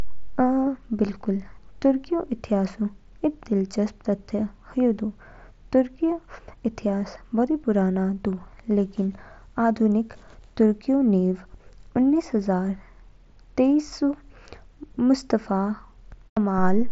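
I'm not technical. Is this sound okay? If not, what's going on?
Yes, there are no faults: this speech comes through a Bluetooth headset using the mSBC codec, which carries sound only up to about 7.7 kHz, and that limit is normal for such a headset.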